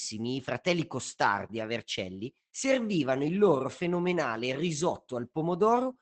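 Opus voice compression runs throughout the speech, with plainly audible damage. Nothing survives above 8.5 kHz because the SILK linear-prediction coder keeps only a wideband range. Coarsely coded excitation leaves the voice muffled, hoarse and slightly robotic, which fits a bitrate near 12 kbps.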